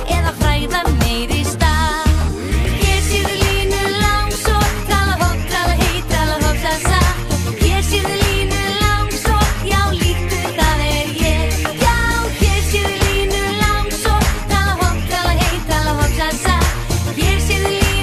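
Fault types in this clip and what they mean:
MP2 compression: a dull, gurgling, granular texture as upper sub-bands flicker out, likely from Layer II coding near 80 kbps, unlike a steady filter's clean dullness.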